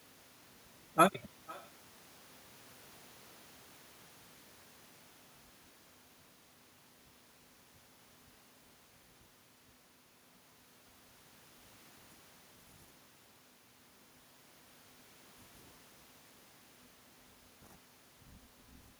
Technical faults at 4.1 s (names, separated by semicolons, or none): echo with no canceller